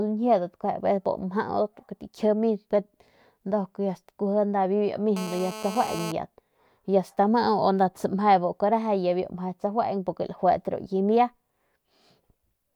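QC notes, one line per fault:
5.17–6.12 s, GSM phone buzz: a 2G handset close to the recording chain was transmitting in bursts at about 217 Hz (216.7 Hz) during a call, and the audio circuitry rectified those radio pulses into the signal path. The result is a hard, raspy buzz at 217 Hz carrying a dense stack of harmonics, sitting about 11 dB below the speech and bearing no relation to it, held steady for just under a second before cutting out.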